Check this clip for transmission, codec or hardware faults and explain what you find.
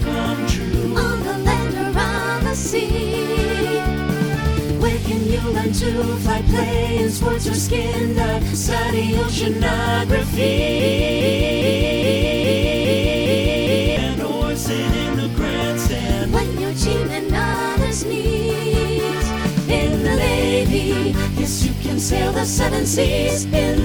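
One transmission fault is present. 10.80 to 13.97 s: broken-record loop. The stream likely stalled and resent its last 0.41 s fragment eight times back to back, losing the intended audio.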